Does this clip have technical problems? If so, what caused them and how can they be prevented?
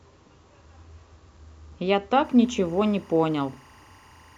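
Yes. Timecode bleed starts at 2.24 s and runs to the end. Linear timecode, likely at 23.976 frames per second, leaks in as a faint chirping warble around 1 and 2 kHz, well below the speech. Keep timecode cables and tracks separated and shielded from audio lines.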